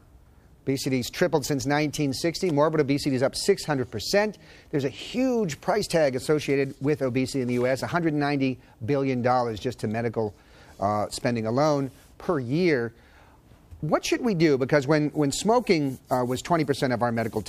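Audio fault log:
No faults detected.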